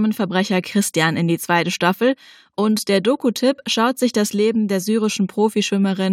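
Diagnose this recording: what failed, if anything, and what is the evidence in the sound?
No failure is audible anywhere in this speech recording.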